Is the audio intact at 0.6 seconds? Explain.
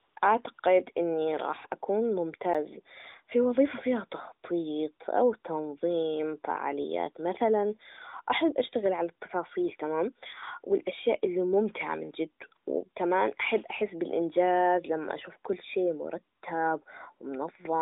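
No. AMR comfort noise: the phone treated the sound as silence and stopped sending speech frames, so the receiver filled 0.54–0.58 s and 0.60–0.62 s with smooth synthetic noise, just before "إني راح".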